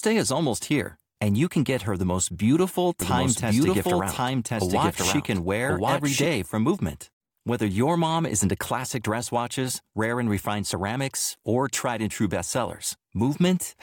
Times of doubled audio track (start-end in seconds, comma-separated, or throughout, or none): 3.02-6.26